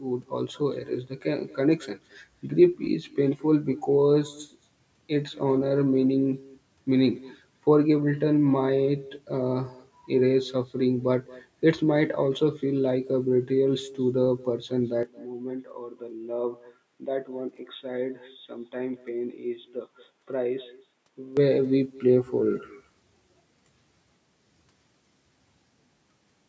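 From the first second to the end, every phrase is trailed by a faint, thinner copy of itself arriving roughly a fifth of a second later, sitting about 22 dB below the direct speech. This is echo with no canceller: the far end is playing the call over a loudspeaker, its microphone is picking that playback up, and nothing in the chain subtracts it before it returns across the network. At this level it reads as a quiet shadow.

From 15.03 s to 21.37 s the speech abruptly loses its top end, with a narrower band than the 8 kHz band heard elsewhere, where the call's normal microphone processing applies. It turns dull and boxy and drops by around 5 dB, with a faint added noise floor far below the speech, then clears again at 21.37 s. Both transitions happen without any gap in the audio. The likely cause is the input switching to a poorer device, such as a headset in its call profile, and then switching back.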